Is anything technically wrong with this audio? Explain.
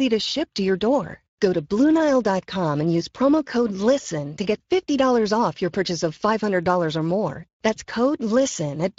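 Yes. Throughout the speech, the Speex codec damage is plainly audible. This CELP coder has too few bits to model the excitation, so the speech sounds hoarse and noisy. The quality fits a rate of roughly 20 kbps. A spectrogram shows grainy, smeared harmonics.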